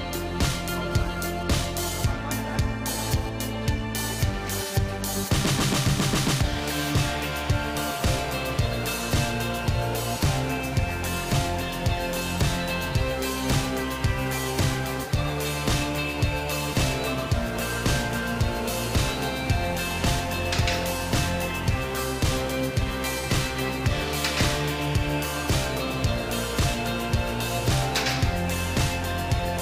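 From 0.92 s to 3.29 s there is GSM phone buzz: a nearby 2G handset sending data transmits in bursts about 217 times a second, and the audio circuitry rectifies those radio pulses into the signal. The result is a hard, rasping 217 Hz buzz, about 16 dB below the programme, that stutters on and off. A spectrogram shows a comb of evenly spaced harmonic lines in intermittent blocks, and the waveform carries regular pulse spikes.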